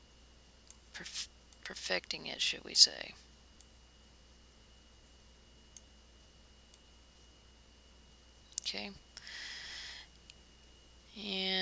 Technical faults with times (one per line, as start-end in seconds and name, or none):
none